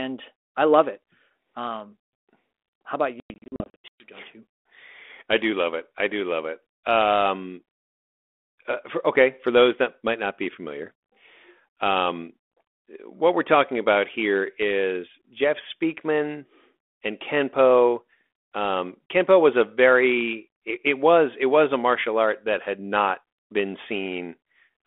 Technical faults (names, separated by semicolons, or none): packet loss on an ADPCM call